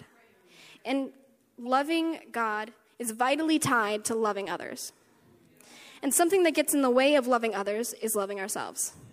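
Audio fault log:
1.66 s corrupt frame decoded: flipped bits in a single compressed frame were played anyway, so misread gains put energy at wrong frequencies, giving a chirp, squeak, blip or burst of noise around -40 dBFS.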